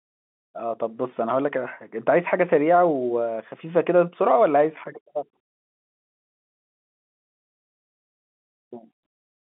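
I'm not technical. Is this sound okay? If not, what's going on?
Yes, this sound is okay, with nothing wrong to hear beyond the usual narrow sound of an ordinary phone line.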